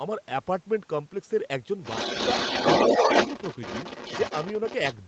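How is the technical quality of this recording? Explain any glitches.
The recording has one clear problem: from 1.83 s to the end, a second voice sits under the main talker at roughly the same loudness, so the two compete. This is other side's voice leaking through, likely because the far end was playing on a loudspeaker and the echo canceller failed to subtract it from the microphone signal. Across the clip the audio stops at about 8 kHz, which fits a wideband call codec.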